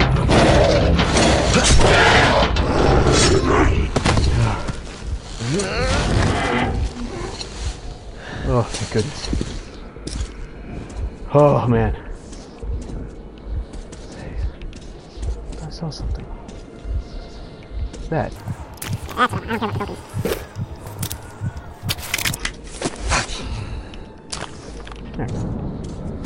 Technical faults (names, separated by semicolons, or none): wrong sample rate